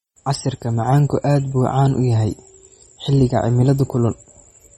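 A short speech recording carries MP3 compression artefacts from start to finish. The codec damage is plainly audible across the whole clip, and the treble stops abruptly, with nothing above 13.9 kHz. That hard ceiling and the degree of damage fit a low bitrate of around 32 kbps. The likely cause is an MP3 encoder short of bits, cutting the upper band at a fixed frequency and dropping weaker spectral detail, which leaves the sound watery or swirly.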